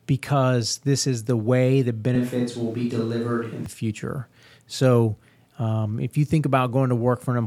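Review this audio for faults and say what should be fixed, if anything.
From 2.15 to 3.66 s the speech abruptly turns roomy and thin, likely a switch to a distant microphone; level barely changes, but room noise rises to about 35 dB below speech. Unlike added reverb, both switches are instant. Monitor the close microphone and record a backup track.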